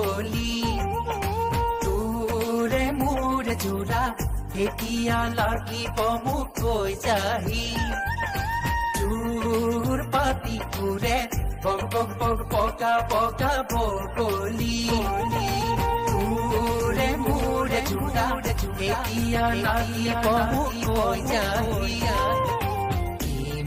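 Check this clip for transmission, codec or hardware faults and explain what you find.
One fault is present. From 14.84 to 22.52 s, a doubled audio track: a second full-band copy trails about 0.7 s behind, a few dB quieter, likely from a slower second capture path, and starts and stops abruptly with no decay, unlike an echo.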